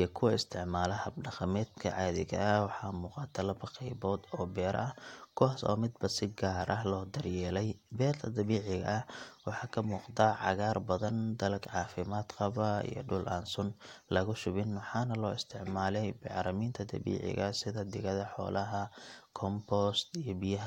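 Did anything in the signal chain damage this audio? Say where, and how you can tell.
No, nothing in the chain damaged this speech.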